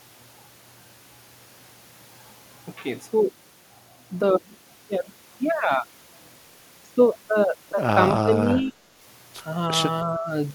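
Between 8.22 and 8.73 s, and again from 10.05 to 10.29 s, the speech dips sharply, by roughly 15 dB and then 10 dB, in brief patches. This is likely speech suppressed in double talk, where an echo canceller mistook near-end speech for echo during overlap.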